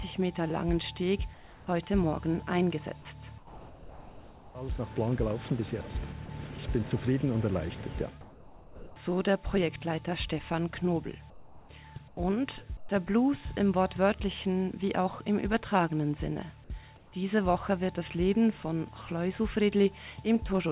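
Seven times the pauses lose their real background and turn into a steady, textureless hiss about 4 to 10 dB quieter than what surrounds them: 1.34 to 1.67 s, 3.38 to 4.55 s, 8.21 to 8.96 s, 11.30 to 11.69 s, 12.08 to 12.17 s, 12.77 to 12.89 s and 16.97 to 17.12 s. This is comfort noise in place of the background. The background there sits roughly 21 to 27 dB below the loud passages, and the likely cause is discontinuous transmission: the sender stops transmitting in quiet stretches, and the receiver fills the gap with synthetic noise that matches only the rough colour of the background.

From 6.26 to 6.29 s, a 30 ms piece of the sound itself briefly gives way to that same flat noise. This is sound dropped by the voice detector, likely because the detector judged a quiet moment to be background and cut transmission until it triggered again.

Across the whole clip nothing is heard above 4 kHz, which fits a G.711 A-law call path at 64 kbps.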